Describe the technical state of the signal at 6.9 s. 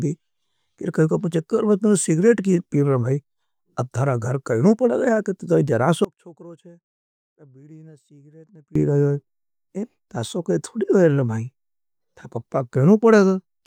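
At 6.9 s the speech is in an audio dropout to a faint residue, running from 6.05 to 8.75 s just after "तो ये". The signal cuts off abruptly, leaving only faint sound roughly 25 dB down, unlike a pause or fade, likely a loss of the wanted signal while the path after the break stayed live.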